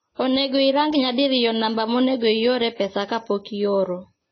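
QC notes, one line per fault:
Throughout: transcoding between lossy codecs. The speech has nothing above 6.5 kHz and carries two overlaid sets of coding artefacts. This points to a low-rate Vorbis encode, likely re-encoded as AAC-LC near 24 kbit/s, with the second coder spending bits on the first one's damage.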